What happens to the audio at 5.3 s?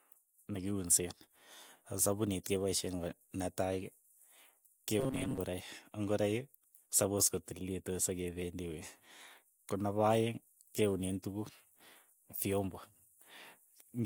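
New audio likely arrived too seldom from 5.00 to 5.38 s, so playback repeated a slice of about 7.5 ms and replaced roughly half the speech. The result is robotic sound from repeated short buffers, a rigid, metallic 133 Hz buzz, ending just before "ngoroik sapos kotililitu".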